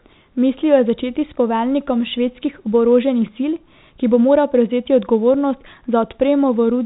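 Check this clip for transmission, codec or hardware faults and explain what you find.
Nothing here points to a transmission, codec or hardware problem; the speech simply carries the usual narrow sound of G.711 telephone coding, with nothing above about 3.8 kHz, and that's just how the phone line works.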